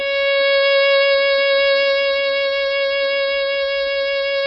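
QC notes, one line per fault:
throughout: MP3 compression, likely at a very low bitrate, which fits about 16 kbps. The starved encoder cuts everything above 5.6 kHz and drops weak frequency lines from frame to frame, so the music sounds dull, watery and swirly, with heavily smeared attacks.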